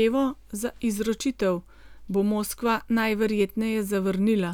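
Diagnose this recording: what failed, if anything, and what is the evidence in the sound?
Listening through the speech recording, nothing stood out that would point to a failure at any stage of the chain.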